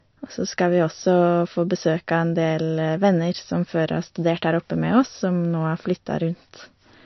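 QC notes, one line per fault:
Throughout, MP3 compression: the speech is cut off flat above 5.9 kHz and has a watery, swirly edge, with s sounds going chirpy and smeared. That's likely a starved MP3 encoder dropping treble and weak detail, which fits a bitrate around 34 kbps.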